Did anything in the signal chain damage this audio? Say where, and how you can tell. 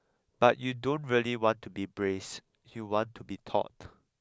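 No, nothing in this speech recording shows damage from the signal chain. Listening closely, no stage between capture and playback has left a mark on the sound.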